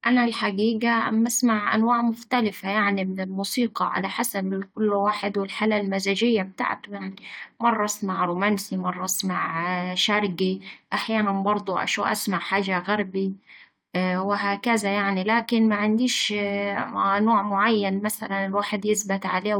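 No technical faults can be heard anywhere in the recording.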